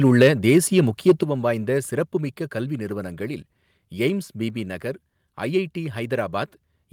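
A harsh, crackling edge cuts across the loudest peak from 1.08 to 1.12 s, with the waveform tops squared off and roughly a fifth of the samples flattened. This is microphone overload, likely from an input volume set about 4 dB too hot for the converter.

At 1.23 s, just after that distorted peak, the speech and background drop together in a single sudden step of about 7 dB. This microphone volume stepping down is likely the call software reacting to the clipping by lowering the device's input gain at once.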